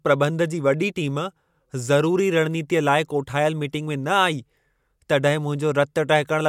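No faults detected: the speech runs with no dropouts, glitches or timing disturbances at any point.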